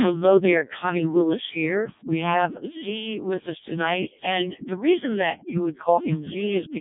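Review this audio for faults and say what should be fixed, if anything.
The speech runs through the Codec 2 vocoder for its whole length, at heavy damage that fits the codec's lowest 0.7 kbit/s mode. Codec 2 keeps no waveform. It sends only pitch, voicing, energy and a coarse spectral envelope, then rebuilds the sound from sine waves, which gives the robotic, buzzy quality heard here. Nothing is present above 3.7 kHz, so the voice sounds narrow and dull. To prevent this, carry the speech over a waveform codec at a usable bitrate rather than a low-rate vocoder.

A sudden gain jump occurs at 2.46 s. The level drops by about 6 dB in a single step and stays down until the end. The speech and the background noise fall together, with no fade between the two levels. The likely cause is a digital gain change, such as a setting change or a one-bit shift, applied from one sample to the next without a ramp. 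To prevent this, apply any gain change as a short ramp of a few milliseconds instead of an instant step.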